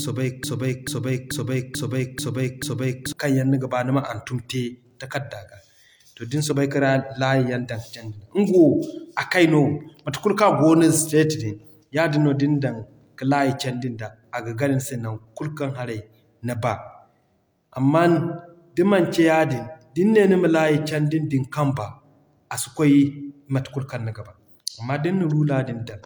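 A broken-record loop runs from the very start of this speech clip to 3.13 s: a fragment about 0.44 s long plays six times in a row, each repeat identical, and is already going when the audio begins. Ordinary speech resumes with "kaŋ yaŋ niga baa". The likely cause is a player, encoder or stream that stalled and kept resending the last piece it held, so whatever should have played during those opening seconds is missing.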